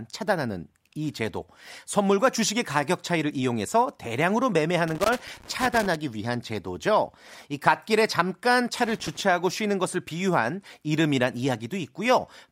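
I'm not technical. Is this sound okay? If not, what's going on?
No. A loose or dirty cable connection is briefly losing and regaining contact, which chops the sound on and off very quickly. That causes loose connector crackle, a rough scratchy burst from 4.88 to 5.96 seconds and again from 8.85 to 9.21 seconds.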